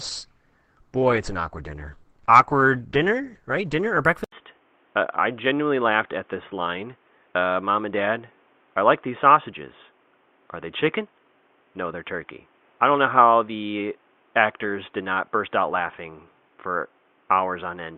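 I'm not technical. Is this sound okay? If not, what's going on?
No. For the first 4.0 seconds this is an adaptive stream starting at a low bitrate: the player begins on a cheap, blurry copy so playback starts fast, then upgrades. The speech sounds thin and smeary, then sharpens abruptly with no break in the sound.

From 4.24 seconds the input switched to a poorer device, likely a headset or second microphone. A brief silent gap at the switch sets this apart from the stream upgrade, which has none. Afterwards the speech stays boxy, with nothing above 3.6 kHz and a faint new background noise, at about the same loudness.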